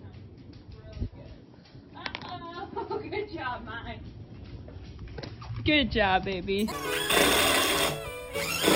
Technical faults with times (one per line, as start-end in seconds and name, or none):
6.59-8.76 imaging from sample-and-hold upsampling